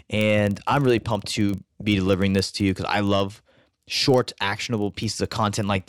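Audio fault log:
throughout, filter restarted on every block: a processing filter drops its memory at each block boundary and starts again from silence, so every block opens with a brief transient. These repeat as a buzz at 23.4 Hz, a rate that fits a 2048-sample block, and the buzz rises and falls with the speech level. On a waveform the transients sit at evenly spaced boundaries. A spectrogram shows thin vertical stripes at the same spacing, strongest where the speech is loudest.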